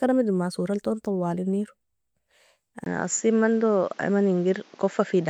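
At 2.84 s the speech drops out for about 20 ms, and from there to the end it sounds like it's coming through a different microphone. Everything above 7.6 kHz is gone, so it turns duller, and a new background noise sits roughly 30 dB under the speech. The level stays about the same. That pattern likely means the input switched to a poorer device partway through the recording.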